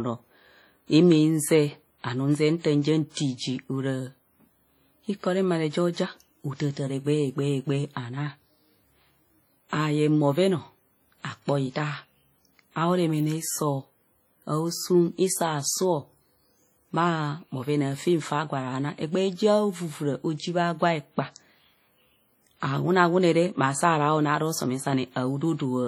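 Across the whole recording there's heavy WMA compression damage, likely from a low-bitrate encode near 32 kbps, leaving the speech ringing and washy, with hiss that breathes along with it.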